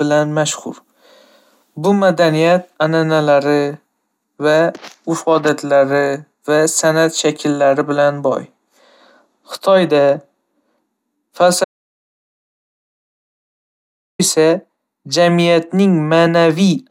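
An audio dropout to silence hits this speech clip from 11.64 to 14.19 s: the speech cuts off mid-flow and about 2.55 s of silence follows, with no room tone, before it resumes. The input was likely lost while the recorder kept writing silence.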